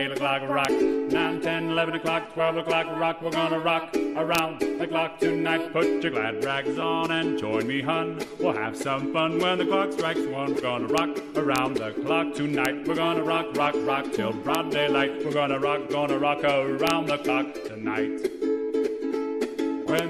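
Integer overflow cracks at 0.65, 4.35–4.39, 10.98, 11.56–11.58, 12.65, 14.55, 16.87–16.90 and 19.99 s. Peaks pushing past the integer limit by only about 1 dB or less wrap to the opposite sign instead of being held. Each produces a violent full-range snap, far sharper than clipping.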